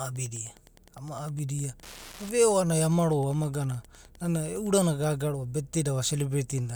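Wi-Fi interference runs from the start of this speech clip to 4.73 s: a steady ticking about ten times a second, sitting roughly 25 dB below the speech. The ticks repeat every 102.4 ms, the interval of a Wi-Fi beacon. A nearby Wi-Fi radio's transmissions are picked up by the audio circuitry and rectified, turning each radio burst into an audible click. The ticking stops at 4.73 s.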